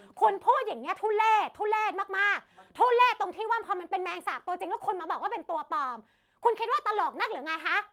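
A short speech recording, and nothing in it sounds technically wrong.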